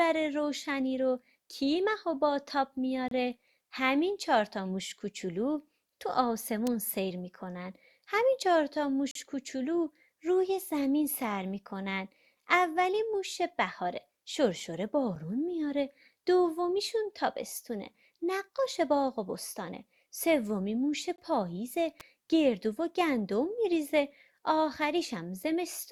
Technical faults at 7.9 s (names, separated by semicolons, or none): none